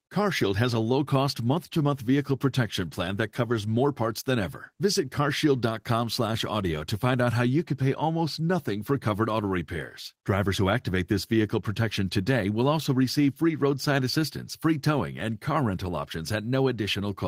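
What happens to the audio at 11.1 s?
Nothing goes wrong at 11.1 s; the speech carries on intact through that moment.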